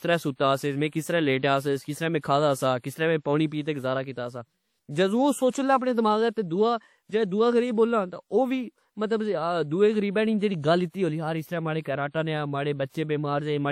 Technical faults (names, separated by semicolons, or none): WMA compression